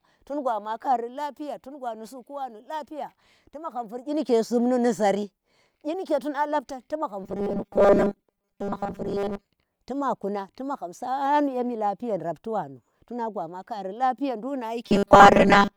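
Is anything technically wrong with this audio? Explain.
Yes. From 7.24 to 9.45 s, after "labtan tu magham" and before "tu ma kuna ti", and again from 14.86 s to the end, there is robotic sound from repeated short buffers. New audio likely arrives too late, so a roughly 5 ms slice is replayed for most of each stretch. The speech becomes a rigid, metallic buzz locked at 200 Hz.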